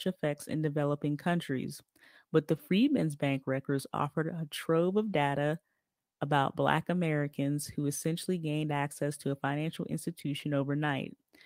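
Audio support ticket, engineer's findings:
Lost packet rebuilt from error correction at 2.53–2.59 s and 7.63–7.69 s: brief rough, noisy patches, no dropout. Fits two lost packets each, with the decoder playing low-bitrate Opus in-band FEC copies for about 40 ms. Waveform stays continuous; spectrogram shows grainier texture there.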